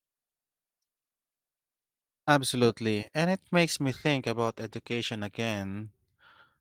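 Speech that turns rough and muffled just after "and it", from 3.64 s to 5.93 s, worst for about 1.2 s, before clearing. This is a call bitrate drop: the encoder coarsened its coding, which fits a fall from about 32 kbps to roughly 15 kbps.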